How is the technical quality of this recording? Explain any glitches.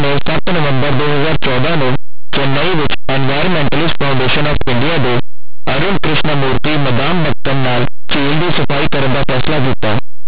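The recording is badly degraded by harsh, very loud distortion that runs through the whole speech clip. The cause is linear audio read as companded: plain linear 8-bit samples are expanded as though they were mu-law codes, so values just on one side of zero jump to the loudest outputs while those on the other side stay small, shredding the waveform. The 8-bit storage is not itself at fault.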